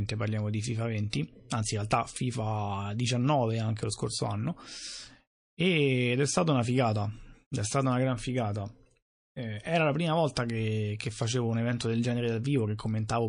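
MP3 compression damage runs through the whole of this speech recording, heard as watery, swirling texture and metallic chirps on s sounds, where weak frequency lines drop in and out between frames. That degree of damage points to a low bitrate around 40 kbps, likely from MP3 encoding. Pre-echo appears from 1.10 to 1.13 s, just before "anzi in realtà": a brief hiss about 15 dB above the surrounding quiet leaks roughly 33 ms ahead of a sharp onset. The encoder spread noise meant for the loud attack across a long block, about 52 ms, instead of switching to short blocks, so the attack itself sounds softened.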